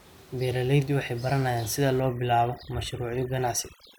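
From 2.0 s, right after "waxay baranayaan sida", overdone noise removal kicks in and runs to the end. The reducer clamps bands sitting near the room noise (about 26 dB under the speech), so the background drops and breaks up into twinkly specks.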